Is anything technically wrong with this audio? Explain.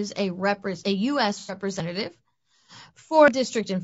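Yes, there are three distinct problems in this speech clip.

The whole thing has a rough, grainy texture, and the likely cause is low-delay AAC compression, the AAC-ELD flavour used in video calls. Its short frames can't pin down pitch harmonics very well and eat up bits, so at a rate the sound suggests is around 32 kbps you get noise filling the gaps between harmonics and a top band that sounds lowered or synthetic. The damage is plainly audible.

At 0.84 s and again at 3.28 s there's a sudden jump in the sound. That's a dropped buffer, likely from an overrun: the software didn't grab its samples before the hardware overwrote them, so a chunk vanished and the two sides got butted together with no silence in between. The first skip loses around 40 ms and the second around 70 ms.

From 1.40 to 1.55 s there's a smeared, noisy patch. That's AAC frame loss with concealment. About 90 ms of coded audio went missing, which fits three lost frames, and the decoder papered over the gap by reusing the last good spectrum with shuffled signs or interpolated energy. 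That's why it sounds blurred rather than cutting to silence.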